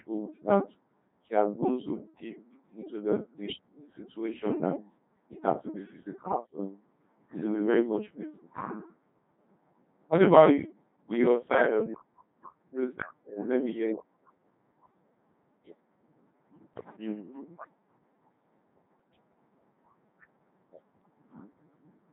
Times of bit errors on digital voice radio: 6.24-6.57, 16.73-16.95

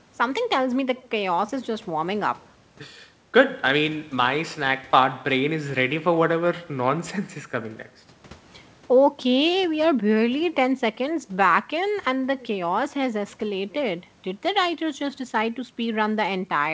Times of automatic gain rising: none

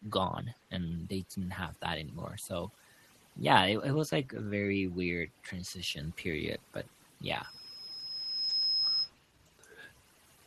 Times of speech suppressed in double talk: 9.44-9.49

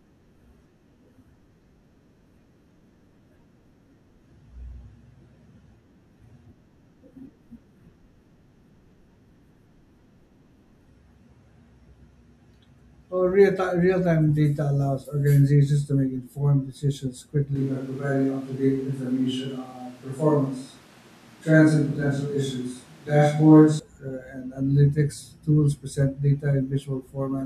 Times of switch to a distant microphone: 17.55-23.79

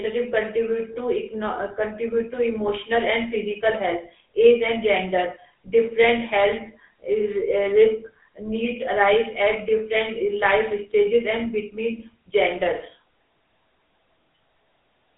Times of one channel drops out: none

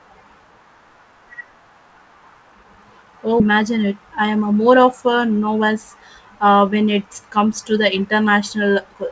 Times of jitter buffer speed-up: 3.50-5.70

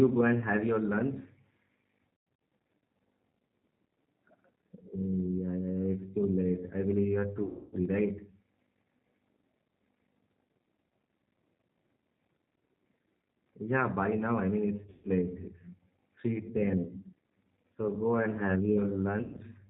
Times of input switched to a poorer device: none

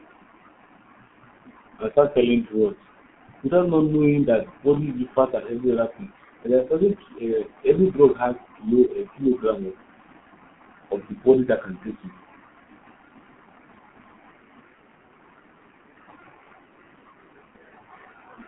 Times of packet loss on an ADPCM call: none

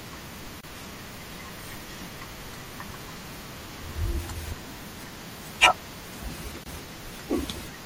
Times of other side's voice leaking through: none

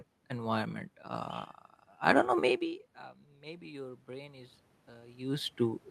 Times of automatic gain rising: 3.31-5.37

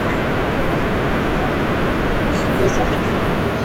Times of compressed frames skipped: 3.11

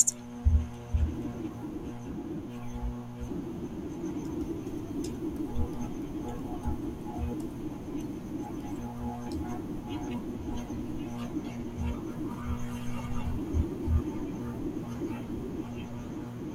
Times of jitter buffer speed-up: none

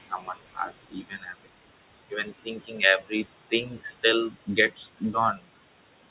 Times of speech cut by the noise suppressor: 0.07-1.50, 2.10-3.12, 3.50-3.86, 4.30-5.44

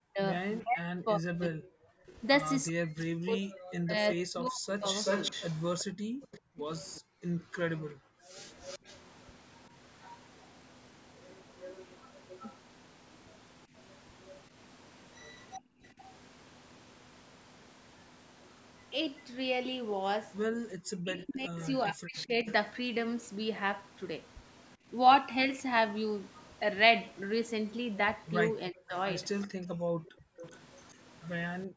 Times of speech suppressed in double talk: 0.00-4.85, 21.03-22.47, 28.71-28.95

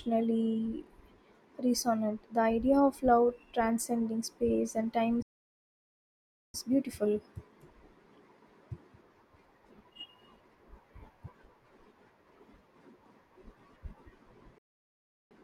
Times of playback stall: 5.22-6.54, 14.58-15.31

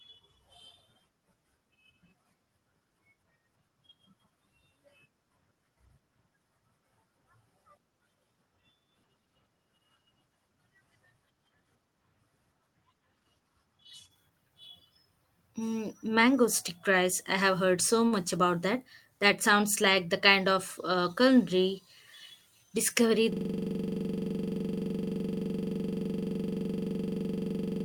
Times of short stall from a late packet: 18.07-18.15

